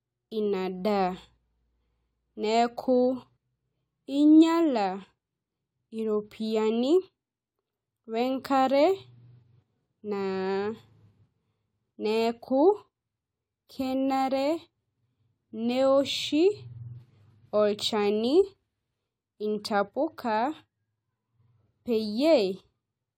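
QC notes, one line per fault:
3.36 s, damaged data in a compressed stream: a quick glitch in the speech where corrupted data tripped up the decoder. It couldn't read that frame, lost sync and hunted for the next header.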